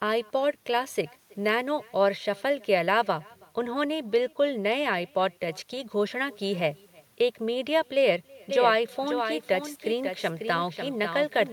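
From the start, the speech carries an echo with no canceller: the far end is evidently playing the call over a loudspeaker, its microphone catches it, and nothing strips it out, so each phrase returns after roughly a third of a second, about 28 dB down. The copy is faint and thinner than the original, which separates it from a simple duplicated track.

At 8.50 s a doubled audio track begins and runs to the end. A second full-band copy of the speech appears abruptly, trailing by about half a second and only a few decibels quieter. Unlike the echo, it carries no room colour and no thinning, just the same sound stacked late, which most likely comes from the audio being captured twice along a slower path or from an edit holding two copies out of step.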